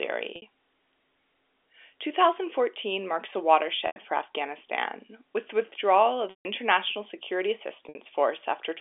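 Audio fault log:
0.36–0.42 s, 3.87–3.96 s, 6.30–6.45 s and 7.89–7.95 s: packet loss with pitch repetition. Gaps of 60, 90, 150 and 60 ms, which fits 30 ms packets, are filled by repeating the last pitch period and fading it out. The short gaps give a brief held buzz. The 150 ms gap fades into silence before the sound cross-fades back, within the 300 Hz to 3.5 kHz band of the G.711 telephone coding.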